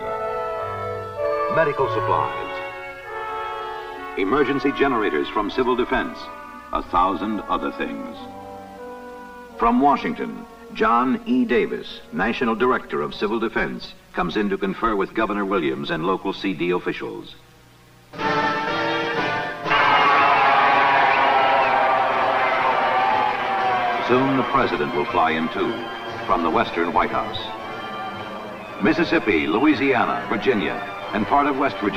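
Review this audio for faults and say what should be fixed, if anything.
Channels drifting apart runs through the whole clip. The two channels come from clocks that disagree by a few hundred ppm. The offset between them grows steadily, reaching roughly 10 ms by the end. Summed to mono, comb notches sweep slowly and sound like flanging. To prevent it, lock both devices to a shared word clock, or resample one channel to match the other.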